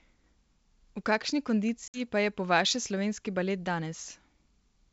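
Packet loss on an ADPCM call, from 1.88 to 2.01 s, drops 60 ms of a few packets and unsettles the decoder's predictor, leaving a hard-edged gap before the speech resettles.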